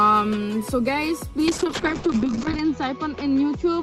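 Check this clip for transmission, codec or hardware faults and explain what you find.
One fault is present. From 1.49 s to the end, a call bitrate drop cuts encoding from 32 to 6 kbps and bandwidth from 20 to 8 kHz, leaving the sound coarse and muffled.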